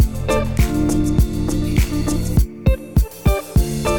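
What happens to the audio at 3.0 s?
Nothing goes wrong at 3.0 s; the audio plays through that moment intact, with no dropout, click or other fault.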